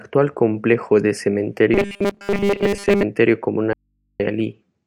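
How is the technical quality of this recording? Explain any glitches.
The recording has two clear technical faults.

From 1.74 s to 3.04 s, just after "complejo de", the speech takes on a robotic sound from repeated short buffers. It becomes a rigid, metallic buzz at 200 Hz that still loosely tracks the speech. The likely cause is that new audio arrived too slowly and the playback software kept looping the most recent 5 ms of audio to fill the gap, discarding most of the real signal. Because the same 5 ms is repeated over and over, the stream carries a steady 200 Hz buzz.

From 3.73 s to 4.20 s there is an audio dropout to a faint residue, lasting 467 ms. The speech cuts off abruptly and, rather than going silent, the gap holds only low mains hum, roughly 50 dB below the normal signal level, before the sound snaps back. This abruptness is what separates it from a natural pause or a fade. 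Hum of that kind points to a signal path that stayed live after losing its source, most likely a momentary break in the feed upstream while the input remained open.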